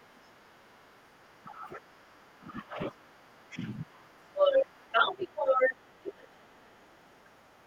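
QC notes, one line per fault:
0.0 to 2.38 s, other side's voice leaking through: a faint second voice sits under the talker, about 25 dB down. The device is likely playing the far end on a loudspeaker, and the echo canceller is leaving a small residue in the microphone signal.
0.5 to 0.81 s, 1.42 to 3.08 s and 3.49 to 4.18 s, speech suppressed in double talk: the talker's voice sags. In the first span it dips by about 5 dB for a brief moment. In the second it drops by about 20 dB across most of the span, roughly one and a half seconds. In the third it drops by a similar depth for about half a second. With both sides speaking together, the canceller likely could not separate the talker from the echo and pulled the whole signal down.
3.06 s to the end, other side's voice leaking through: the far voice becomes clearly audible and ends up about 5 dB louder than the talker. The loudspeaker echo is likely getting through the canceller almost unchecked, so the two voices compete for the rest of the clip.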